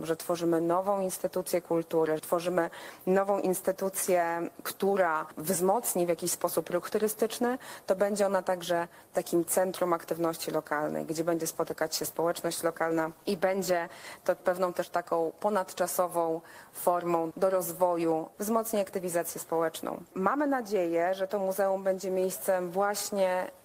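From 11.34 s to 14.15 s the sound becomes coarser, turning rough, watery or muffled, then clears again. It stays at its worst for about 2.75 s of that stretch. This is a call bitrate drop: the call's bandwidth estimate fell and the Opus encoder was told to spend far fewer bits, which fits a fall from roughly 32 kbps to 18 kbps. It coded the audio more crudely until the rate came back.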